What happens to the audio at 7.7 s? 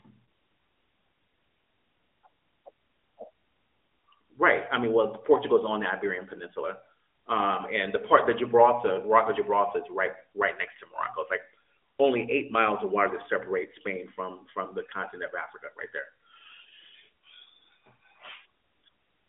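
Nothing goes wrong at 7.7 s: the speech carries on intact through that moment, heard through the usual band-limited sound of the AMR narrowband mobile codec running at 12.2 kbps.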